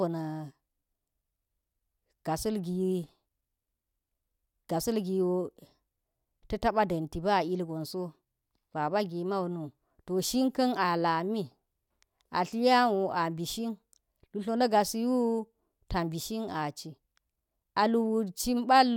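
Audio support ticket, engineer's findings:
No faults found in this speech recording; no symptom, component or mechanism to report.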